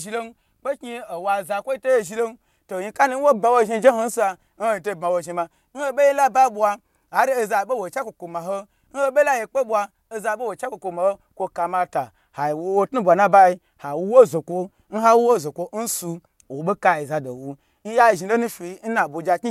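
No technical faults can be heard anywhere in the speech, and the signal holds steady in level and continuity throughout.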